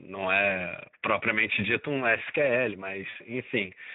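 Throughout, the speech carries plainly audible Speex codec damage: hoarse, noisy excitation and a thin, synthetic-sounding upper band, which fits a setting around 11 kbps. Unlike MP3-style smearing, the roughness follows the voice's pitch pulses rather than ringing around transients.

At 0.49 to 0.52 s, and again at 3.09 to 3.17 s, VoIP packet loss concealed by the speech codec stretches the sound into a fading buzzy tone or coloured noise instead of a silent gap. The short event fits one lost 20 ms frame, the longer one three frames (60 ms), with the weakened, distorted voice lingering briefly afterwards.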